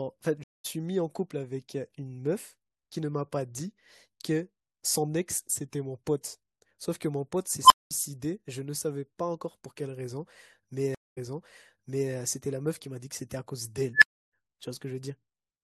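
At 0.44 s there's a stream reconnect. The connection dropped, leaving about 207 ms of silence, and a fresh decoder picked up mid-stream, so the speech comes back with a fade-in, roughly 0.2 s further on than where it stopped.

At 7.65 s an unstable filter kicks in. Bad coefficients make a tone around 1 kHz swell over 53 ms until it clips, then the output overflows and you get about 207 ms of silence before it resets.

At 10.95 s there's another stream reconnect, with about 221 ms of silence. This time the audio resumes 939 ms earlier, so you hear that stretch again after the fade-in.

At 13.94 s the unstable filter returns, this time as a tone around 1.5 kHz that builds over 74 ms, clips, and drops into about 299 ms of silence.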